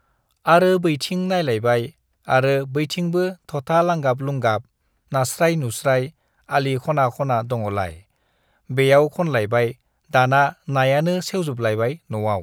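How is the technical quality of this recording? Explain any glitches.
No glitches turn up anywhere in the recording, and the signal holds steady with no dropouts, clicks, distortion or other technical faults to explain.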